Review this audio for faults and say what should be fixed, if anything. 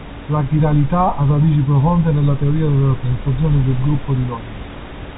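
Nothing in the recording needs fixing. The room noise sits about 18 dB under the speech, and the telephone coding keeps the sound within a narrow band with nothing above 3.8 kHz.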